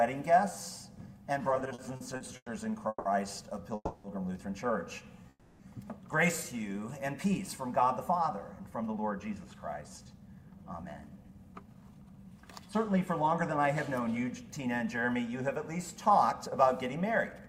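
From 1.49 to 2.48 s the audio shows repeated stalls (stutter): nine short gaps, the longest 100 ms, where late packets left the jitter buffer empty and the last sound was stretched to cover 270 ms. Unlike a single freeze, it drags in quick, uneven hitches.

Call audio freezes follow at 2.88 to 3.07 s, 3.75 to 4.06 s and 5.30 to 5.62 s, each a held, fading continuation of 170, 290 and 300 ms ending in a brief silence, likely from packets held up in transit. Nothing is lost; the sound resumes where it stopped, later.

From 8.44 to 14.25 s a jitter buffer speed-up plays the audio about 10% fast, trimming about half a second of tiny pitch-period pieces to shed the built-up delay. Pitch stays unchanged, so it sounds hurried rather than raised, as a tape speed change would.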